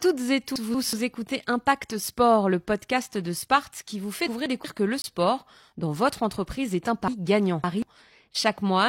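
Speech, with two kinds of timing fault. The first is chunks out of order, heard three times. From 0.56 to 0.93 s, and again from 4.27 to 4.64 s, two pieces of about 186 ms trade places. From 7.08 to 7.82 s, one piece plays after the three that should follow it. Nothing goes missing. The order is wrong, and each rearranged stretch sounds jumbled. The second fault is a gap between stream segments, from 5.02 to 5.04 s. The audio arrives in 4-second segments, and the time stamps at this boundary leave a hole of about 22 ms. The player fills it with silence, so the sound cuts out abruptly and resumes with sharp edges. No audio is lost there either.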